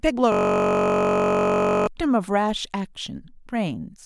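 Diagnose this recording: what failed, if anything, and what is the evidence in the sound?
The audio driver or buffer stage failed: from 0.32 s to 1.87 s the system hang loop shows the host stalling while the interface kept replaying the same ring buffer. A 21.33 ms slice of the speech repeats exactly, dozens of times in a row, which fits a 512-sample buffer. Because the loop is so short, it repeats at 46.9 Hz and fuses into a steady, pitched buzz in place of the speech until the driver recovers.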